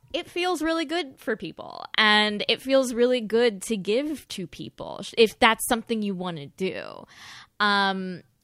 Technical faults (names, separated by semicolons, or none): none